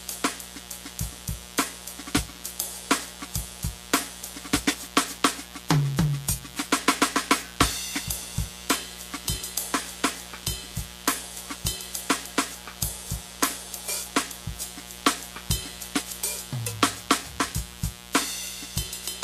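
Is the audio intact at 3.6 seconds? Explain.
No. At 3.6 s, as throughout the music, a mains buzz sits fairly loud, roughly 15 dB below the signal. Switching spikes twice per 60 Hz cycle spread harmonics into the kilohertz range. That gives a raspy edge, unlike the smooth, low tone of plain hum.

The treble is also grainy and hissy, attacks are smeared, and nothing survives above 14.2 kHz. This is likely Vorbis compression at a low bitrate, which replaces fine detail with noise. A simple low-pass filter would only dull the sound, without that graininess.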